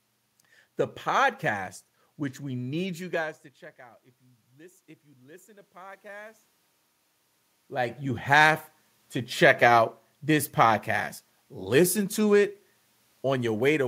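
Automatic gain rising runs from 4.55 to 6.41 s. The level reaching the microphone had dropped by about 24 dB, so the gain control judged the input too quiet and slowly turned itself up by about 3 dB over almost two seconds. The speech and the room noise beneath it swell together in a gradual ramp. The level shifts from the talker moving, around 3 s and again around 7 s, are separate from this.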